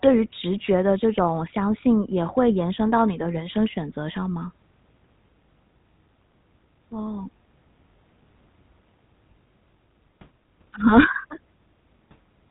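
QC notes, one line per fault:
Throughout, GSM full-rate codec: the speech carries a plainly audible buzzy, gravelly roughness from the coarse pulse excitation driving a vocal-tract model, and nothing passes above 3.8 kHz. That grit, not just the missing top end, separates it from plain band-limiting, and it fits a 13 kbps stream.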